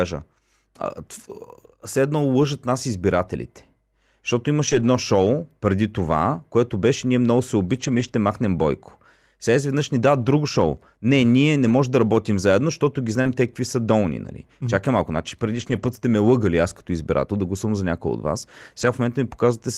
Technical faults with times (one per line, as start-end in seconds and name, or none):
2.41-2.43 lost packet rebuilt from error correction
4.67-4.85 lost packet rebuilt from error correction
7.75-8.09 lost packet rebuilt from error correction
11.67-11.73 lost packet rebuilt from error correction
13.21-13.27 short concealed packet loss
13.25-13.27 lost packet rebuilt from error correction
15.51-15.97 lost packet rebuilt from error correction
15.99-16.03 short concealed packet loss
18.81-18.87 lost packet rebuilt from error correction